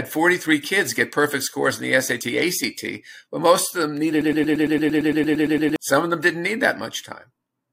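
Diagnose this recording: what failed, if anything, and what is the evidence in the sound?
A broken-record loop runs from 4.21 s to 5.76 s, straight after "but most of them". A fragment of about 114 ms repeats 14 times back to back, identical each pass, and then the speech resumes. The stage is likely playback or streaming buffering: the player or stream stalled and kept re-emitting the last block it held instead of new audio, so the speech that belonged in those 1.5 seconds is missing from the recording.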